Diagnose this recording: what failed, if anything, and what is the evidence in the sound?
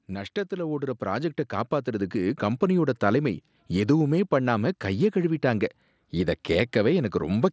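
Automatic gain rising in the call processing stage: from 0.05 to 2.9 s the level climbs by about 10 dB, settling before "தலைமை எதுவுமே பண்ணாம". Voice and background swell together over nearly three seconds, which points to gain control rather than a talker moving closer. The mSBC headset path stays limited to 8 kHz.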